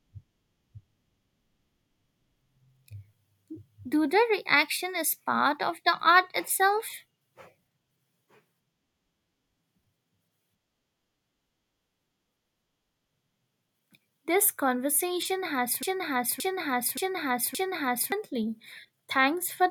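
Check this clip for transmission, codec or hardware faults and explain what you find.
One fault is present in this speech clip. From 15.83 to 18.12 s, a broken-record loop repeats a 0.57 s fragment four times back to back. A stalled player or stream likely resent its last buffer, so the intended audio is lost.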